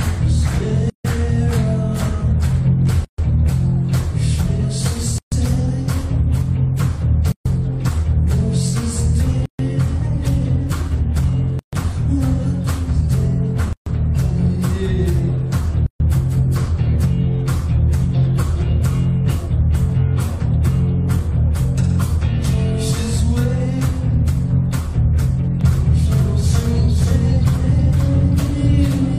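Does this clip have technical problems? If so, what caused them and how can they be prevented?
Yes. There's a gap at a join of encoded pieces at 0.90, 3.05, 5.18, 7.32, 9.46, 11.59, 13.73 and 15.86 s. Each is a silence of about 136 ms (148 ms the first time) between roughly 2 s chunks, from encoder delay and padding left in. Trim each encoder's priming and padding, or use gapless joins.

From 25.61 s to the end there's a doubled audio track: a dry copy about half a second late and about 5 dB quieter, likely from a second, slower capture path. Make sure only one capture path feeds the mix.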